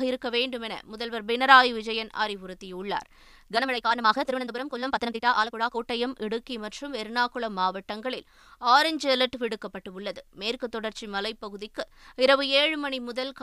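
From 3.48 to 5.80 s, a time-stretched section plays at about 1.82 times speed. The pitch holds steady, but the speech turns rushed. Software squeezing to fit is the likely cause.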